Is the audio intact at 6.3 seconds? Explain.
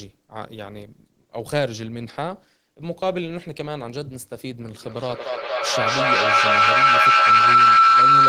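No. From 4.74 to 8.28 s, a microphone-to-loudspeaker loop gains level each pass, producing a feedback howl near 1.5 kHz, about 14 dB over the speech, its loop repeating roughly every fifth of a second.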